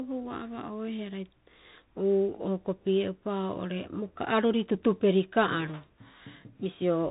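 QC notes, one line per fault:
throughout, Bluetooth CVSD headset codec: the speech sounds boxed-in and phone-like, with scratchy s sounds, a granular hiss beneath, and harsh distortion on loud bright moments; one-bit up/down coding at 64 kbps with an adapting step cuts everything above 4 kHz and lags fast swings.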